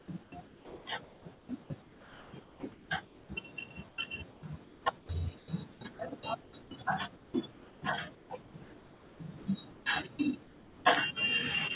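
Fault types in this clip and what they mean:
Sound chopped by the voice detector: from 0 to 3.29 s speech edges cut in and out, with about 2.1 s replaced by flat noise, likely from voice-activity gating.
Comfort noise in place of the background: pauses at 3.89–5.81, 6.41–9.86 and 10.43–10.85 s hold steady, featureless hiss, about 4 dB quieter in the last, likely from discontinuous transmission.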